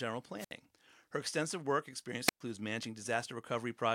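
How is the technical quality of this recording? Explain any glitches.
The recording has two audible dropouts in the speech, both of the same kind. Wireless microphone squelch dropouts occur at 0.37–0.53 s and 2.25–2.41 s. The analogue FM radio link weakens, so hiss and static swell until the receiver's squelch cuts the output. That leaves a gap of near silence lasting about 67 ms in the first event and about 115 ms in the second, before the signal recovers and the voice comes back.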